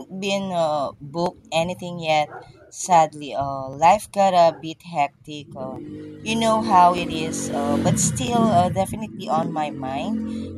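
Six sharp, isolated clicks turn up in this speech, at 1.26, 3.73, 5.76, 6.98, 8.28 and 9.43 s. Each is a single tick with no gap you could hear, and on a spectrogram it shows as a thin vertical line right across the band. The likely cause is dropped samples: well under a millisecond of the stream goes missing, so the waveform jumps straight from one value to a later one, and that step is the click.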